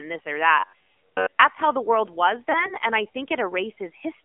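A speech recording carried through the AMR narrowband mobile codec (AMR-NB) at 7.4 kbps, so everything sits within a 250 Hz to 3.4 kHz line band. The spectrogram shows a hard ceiling, with nothing above 4 kHz, and the voice comes across buzzy and synthetic, with plainly audible codec damage. From 0.59 to 1.42 s, between "this or" and "how the world was", the voice turns into a rigid metallic drone. The likely cause is robotic sound from repeated short buffers: a slice of roughly 10.7 ms is replayed in place of fresh audio for most of that stretch. The spectrogram shows evenly spaced harmonics locked to a 93.8 Hz buzz, and the waveform shows identical repeating cycles. Lost AMR speech frames follow from 2.52 to 2.75 s, after "how the world was" and before "and i". One 20 ms frame fails, and the decoder fills it with the previous pitch and vocal-tract settings at reduced gain. This is heard as a brief dip and warble and appears as a small notch in the waveform envelope.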